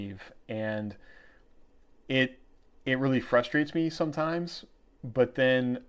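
No faults are audible in the speech; the band stops at 8 kHz, which fits a wideband call codec such as G.722 on a WebRTC path working as expected.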